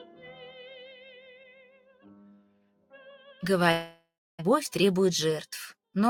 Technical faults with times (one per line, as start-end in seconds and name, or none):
0.00-6.10 noise suppressor applied to music or sounds
0.92-2.06 sound cut by the noise suppressor
2.36-2.93 sound cut by the noise suppressor
3.71-4.40 long network dropout